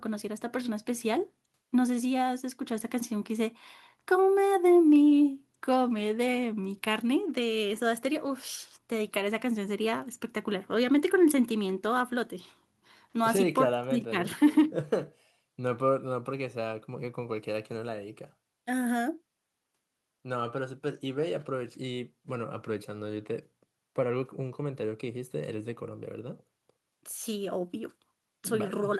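No technical faults can be heard anywhere in the recording; the signal stays intact and steady throughout.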